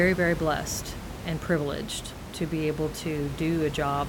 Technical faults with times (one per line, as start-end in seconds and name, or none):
none